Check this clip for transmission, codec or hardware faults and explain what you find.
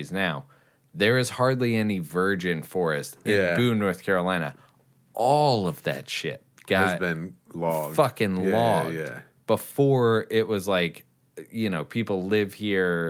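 No fault of any kind can be heard anywhere in the speech. Nothing in the audio calls for explanation.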